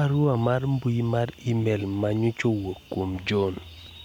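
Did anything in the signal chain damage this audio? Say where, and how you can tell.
No, nothing in the signal chain damaged this audio.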